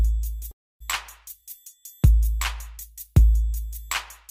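A call audio freeze runs from 0.51 to 0.82 s. The sound stops and the gap is filled for about 0.29 s, almost all of it silence, before the audio picks up exactly where it left off with nothing lost. That pattern points to packets likely held up in transit, draining the jitter buffer so the receiver had nothing to play. Everything after the freeze arrives about 0.29 s later than it would have.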